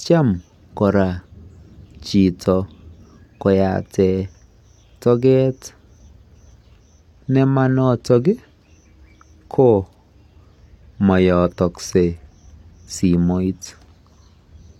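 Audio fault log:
6.81–14.79 s, adaptive stream at a lower bitrate: the speech suddenly turns duller and synthetic in the treble, with nothing above 16.3 kHz and more codec artefacts, but no gap. The stream switched to a lower-bitrate version, consistent with a drop from about 96 to 32 kbit/s.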